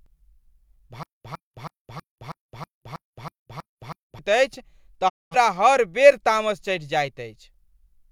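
From 1.03 to 4.19 s the speech falls into a stutter with silent gaps. A 106 ms fragment plays, then about 215 ms of digital silence follows, and the same fragment returns every 321 ms, nine times in all. The likely cause is a stalled player or stream replaying its last buffer on each retry and then running dry. On a waveform this shows as identical short blocks separated by flat lines. A spectrogram shows matching vertical slabs with blank columns between.

At 5.08 s a digital broadcast dropout mutes the speech. It fades out over about 20 ms and stays silent until 5.35 s, when it resumes with "हर बेर तामस". About 213 ms of audio is gone, which fits a receiver discarding roughly five corrupted frames and muting until valid ones arrived. The waveform tapers briefly into a flat gap, and the spectrogram shows a clean vertical blank band across all frequencies.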